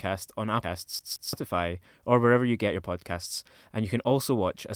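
Speech, with three distinct playback faults. At 0.63 to 0.65 s there is a skip ahead: roughly 0.4 s of audio is dropped, either in transit or by an overflowing jitter buffer, while later audio was already queued. Nothing fills the gap, so the material before and after the cut is butted almost directly together. The listener hears an abrupt forward jump rather than a pause, and the delay shortens by about the same amount. From 0.99 to 1.33 s the sound behaves like a CD stuck on one turn. A 170 ms segment is replayed twice in immediate succession, as if the pickup were thrown back to the same point each revolution. This gives a quick, evenly spaced stutter with a brief mute at each jump back, the characteristic rhythm of a skipping disc rather than a network glitch. From 2.67 to 4.12 s a jitter buffer speed-up is audible. The receiver had more audio queued than its target and trimmed it down by repeatedly cutting out short pitch-period-length slices, removing roughly a tenth of a second in total. 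Playback over that stretch runs at about 107% speed while the pitch stays the same, so the speech sounds slightly rushed and compressed in timing without any change in voice register.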